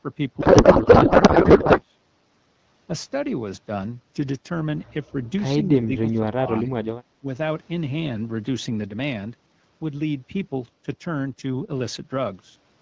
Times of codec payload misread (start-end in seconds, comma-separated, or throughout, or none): 0.40-1.82